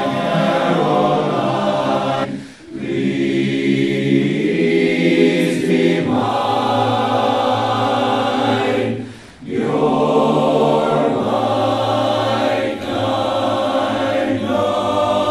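At 2.23 to 2.25 s, a stretch of the compressed stream carries damaged data: some bytes arriving at the decoder are wrong, so it misreads the frames there, loses its place in the bitstream and hunts for the next valid frame header before regular decoding resumes. For roughly 22 ms the audio is replaced by garbled output, heard as a brief chirp or squawk cutting into the sound before the stream picks up again.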